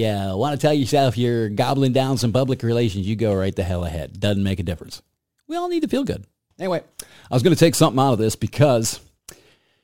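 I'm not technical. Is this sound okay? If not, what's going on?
No. A gritty fizz runs through the whole clip, riding on top of the speech. This is crude rate conversion: the audio was moved to a new sample rate by simply repeating samples instead of smoothing properly, which fits a jump from 44.1 kHz to 48 kHz. Unlike steady background hiss, this fizz rises and falls with the speech, strongest on loud and sharp sounds, and it carries odd tones unrelated to the voice.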